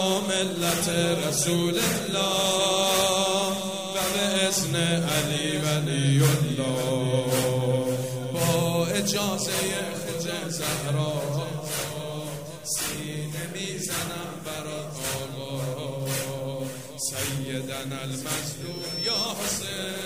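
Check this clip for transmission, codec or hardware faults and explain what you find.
One fault is present: a loudspeaker feedback squeal from 18.61 s to 19.33 s. A microphone is picking up the loudspeaker it drives, and at 5.4 kHz the loop gain has passed one, so that frequency feeds on itself. It swells over roughly half a second to about the level of the surrounding audio. That self-building rise from nothing, rather than a tone appearing at a constant level, sets it apart from steady interference or a carrier whine.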